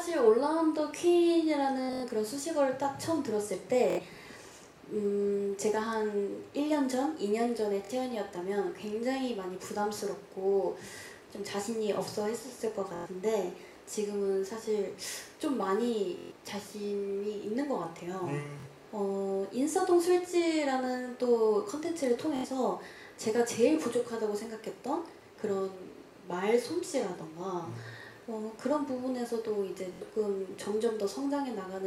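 Bluetooth stutter hits at 1.84, 3.90, 7.85, 12.96, 16.19, 18.60, 22.36 and 29.93 s. Packets arrived late or not at all, so the receiver replayed short slices of roughly 23 ms, which sounds like a brief buzzy stammer. Each time, 46 to 139 ms of audio is skipped before playback jumps ahead.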